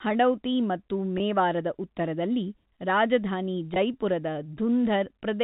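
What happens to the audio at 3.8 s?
Just after "ಉತ್ತರದಲ್ಲಿ ರಾಜಧಾನಿ", from 3.74 to 3.76 s, there is a brief packet loss with pitch repetition. About 20 ms of telephone-band audio, which fits one lost packet, is bridged by repeating the last pitch period, producing a short, slightly held, buzzy sound.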